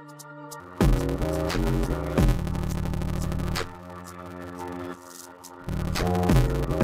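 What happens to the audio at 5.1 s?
At 5.1 s there's a block size mismatch (padded), running from 0.6 s to the end. Each block arriving in the reader's 512-sample slots falls short, and the remainder is zero-filled. That gives a buzz at 86.1 Hz and slows the audio to 0.625× at normal pitch. The waveform shows regular flat gaps, and the spectrogram shows evenly spaced vertical stripes with harmonics of 86 Hz.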